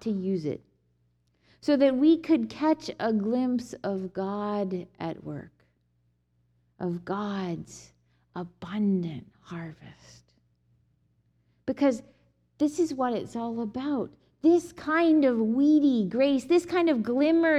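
No technical faults can be heard anywhere in the audio, and the signal holds steady and intact throughout.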